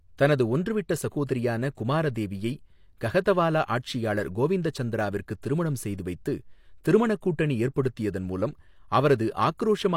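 At 5.42 s, after "குமாரதேவியை கஹதவாலா ஆட்சியாளர் கோவிந்தச்சந்திராவிற்கு", and at 9.58 s, pre-echo appears. Block-spread codec noise leaks ahead of an attack. It makes a brief hiss, 12 ms and 18 ms.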